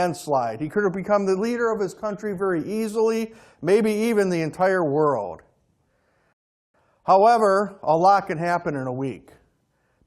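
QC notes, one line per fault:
6.33–6.74 s, rebuffering stall: the speech drops to silence for about 0.41 s, then picks up at exactly the point where it stopped. The player ran short of downloaded audio and paused until more arrived, so nothing is lost but 413 ms is added.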